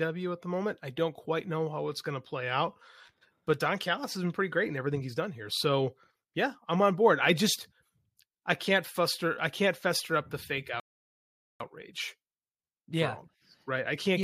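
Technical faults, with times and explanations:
10.80–11.60 s, rebuffering stall: after "fester up the fake" the speech drops to silence for 0.8 s. Playback ran dry, then resumed exactly where it stopped.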